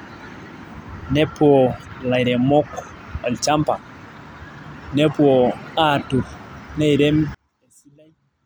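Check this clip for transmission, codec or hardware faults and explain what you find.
There's one fault, right at the end. From 7.35 s to 8.45 s the speech drops by about 33 dB to a faint trace, likely one channel inverted, so the centred speech cancels when summed to mono.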